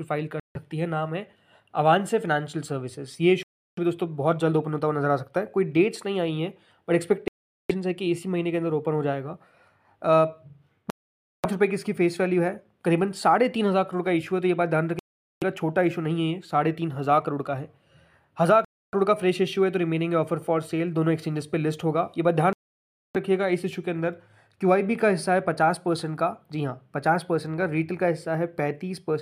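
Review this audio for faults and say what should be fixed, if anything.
The sound drops to silence seven times, at 0.40–0.56, 3.43–3.78, 7.28–7.71, 10.90–11.46, 14.99–15.44, 18.65–18.95 and 22.53–23.16 s, each gap lasting 0.16 to 0.62 s. This is likely a Bluetooth stall: the receiving buffer emptied while delayed packets were resent. Unlike a clean mute, a stall ends with playback resuming where it paused, or slightly later if queued audio was discarded. To prevent it, reduce wireless interference and distance, or use a larger receive buffer.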